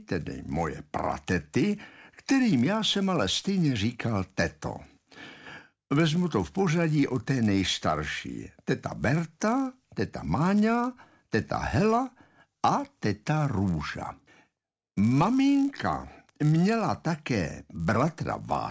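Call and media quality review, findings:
Resampler restarted on every block, whole clip. Converter state reset at each 10 ms block edge, so filter history is lost and each boundary carries a small discontinuity. Symptom: steady buzz at 100 Hz riding on the signal, gone in gaps. Probable component: sample-rate conversion stage, sound consistent with a 48 kHz to 16 kHz downsample. Fix: carry resampler state across blocks.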